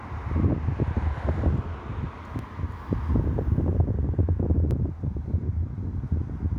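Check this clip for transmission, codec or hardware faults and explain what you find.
Two brief discontinuities are audible in this everyday-sound recording, at 2.39 s and 4.71 s. Each is a jump where the sound skips ahead with no silence, likely a dropped buffer (overrun): samples were overwritten before being read, about a millisecond or two lost at the first and a few at the second. Unlike a dropout, there is no gap, only the splice.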